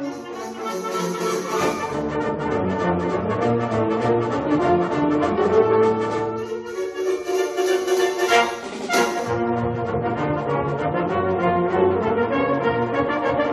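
No technical faults can be heard anywhere in the audio. Nothing in it points to a problem in how the sound was captured, processed or delivered.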